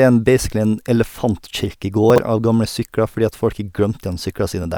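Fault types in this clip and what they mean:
Chunks out of order: from 2.1 to 2.18 s, one 20 ms chunk of the speech plays three chunks late, after the three 20 ms chunks that should have followed it. No audio is lost, but that 80 ms stretch is rearranged, leaving three hard joins where unrelated waveform edges meet. The result is a brief garbled, jumbled moment in the speech.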